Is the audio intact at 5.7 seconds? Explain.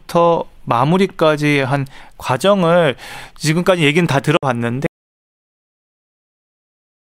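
No. An audio dropout to silence runs from 4.86 s to the end of the clip, so 5.7 s falls inside it. The input was likely lost, leaving the recording writing silence: the speech cuts off abruptly, with no room tone remaining.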